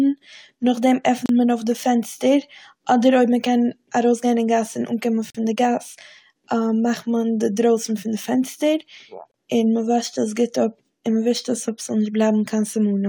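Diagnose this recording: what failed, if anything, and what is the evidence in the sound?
At the playback stage, a gap between stream segments recurs every 4 s: segment time stamps leave holes that the player fills with silence. Hard-edged dropouts last 34 ms at 1.26 s, 43 ms at 5.30 s after "אין גאס און אנקומען", and 27 ms at 9.31 s after "דרויסן פון די פענסטער". No audio is lost.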